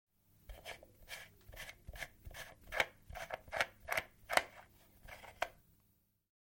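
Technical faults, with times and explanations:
No technical faults can be heard in this audio. Nothing in it calls for a time or an explanation.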